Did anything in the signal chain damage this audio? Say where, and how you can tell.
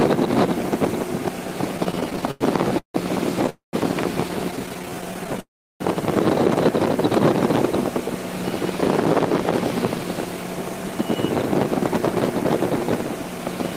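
Yes, repeated stalls (stutter) from 1.77 to 3.50 s and 4.51 to 5.40 s point to the network and jitter buffer. Packets arrived too slowly, so playback kept running dry: 15 gaps (400 ms concealed, longest 160 ms), then 16 short gaps (161 ms). The receiver stretched the last sound each time.

A call audio freeze follows each stutter run, at 3.50 to 3.75 s and 5.40 to 5.82 s. The last sound is held, then fades to silence (about 140 ms and 350 ms of it), and playback resumes where it stopped, adding 235 ms and 400 ms of delay. Delayed network packets are the likely cause.

Jitter buffer speed-up at 9.96 to 11.16 s (110% speed) and 13.16 to 13.71 s (106%) sounds hurried at an unchanged pitch. The receiver trimmed pitch-period slices, about a tenth of a second and a few tens of milliseconds in total, to drain the backlog.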